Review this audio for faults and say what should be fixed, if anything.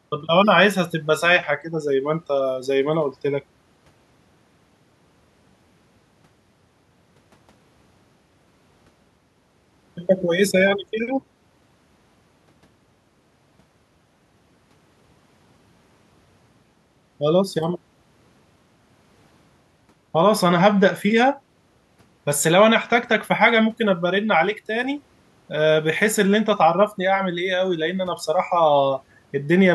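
Nothing stood out on listening, so there is nothing here that needs fixing.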